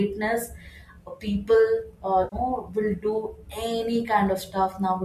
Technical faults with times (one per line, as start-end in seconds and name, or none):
2.23-2.36 AAC frame loss with concealment